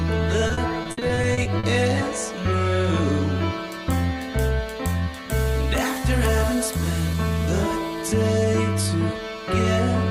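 From 0.47 to 1.65 s the sound breaks up with repeated packet loss (robotic sound). Eleven short dropouts, the longest about 60 ms, come in quick succession. Each hole is bridged by stretching the preceding sound, filling about 320 ms in all, roughly 27% of that span. The result is choppy, with pieces missing. A spectrogram shows smeared, repeated frame-like blocks and abrupt seams, and the waveform shows repeated, near-identical cycles.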